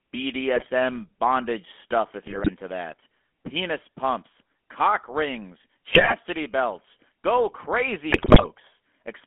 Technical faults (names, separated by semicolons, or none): GSM full-rate codec; GSM bit errors